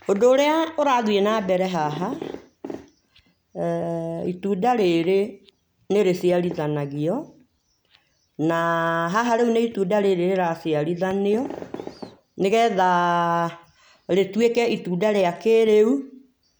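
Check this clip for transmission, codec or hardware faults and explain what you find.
Nothing in the clip stood out as a problem on listening.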